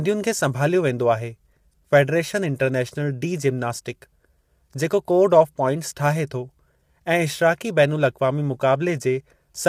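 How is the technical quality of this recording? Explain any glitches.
The quality is clearly degraded by low-delay AAC compression across the whole recording. The damage is plainly audible. The speech sounds rough and grainy from start to finish. Noise fills the gaps between the pitch harmonics. The top band sounds thin and partly synthetic. The likely cause is an AAC-ELD encoder at a low bitrate, around 32 kbps. Its short frames cannot separate closely spaced harmonics well. So the coder smears them with noise.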